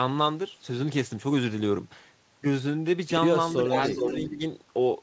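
From 3.86 to 4.17 s, a delayed copy of the speech comes back, trailing the original by about 413 ms and about 5 dB quieter. This is an echo leak. A far-end loudspeaker's sound was likely picked up by its microphone and not fully cancelled.

From 4.27 to 4.41 s, while both sides talk at once, the speech dips by around 10 dB for roughly 150 ms. This is speech suppressed in double talk. The echo canceller likely turned down the talker along with the echo.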